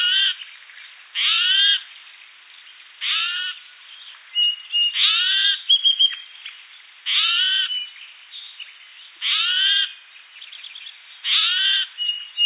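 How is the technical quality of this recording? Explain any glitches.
Nothing in the recording stood out as a technical problem on listening.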